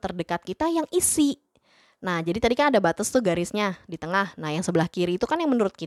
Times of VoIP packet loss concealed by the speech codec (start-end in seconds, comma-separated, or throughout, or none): none